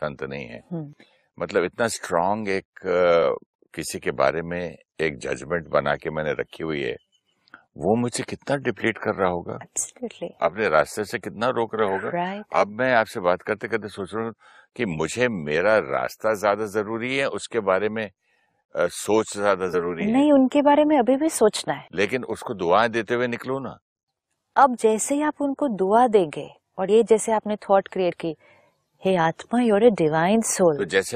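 At 19.73 s the speech jumps ahead, and it does it again at 26.88 s and 28.11 s. Those are compressed frames skipped, where whole blocks of the coded audio never reached the output. The first gap loses about 50 ms and the later two about 70 ms each, which fits two or three dropped frames of 23.2 ms.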